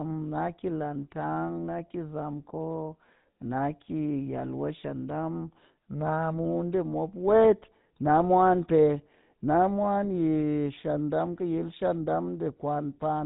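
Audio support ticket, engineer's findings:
Buzzy, gravelly roughness on speech, entire clip; nothing above 3.8 kHz. Probable component: GSM full-rate codec, fits 13 kbps. Excitation rebuilt from sparse regular pulses. Not plain lowpass: grit persists throughout, no dropouts.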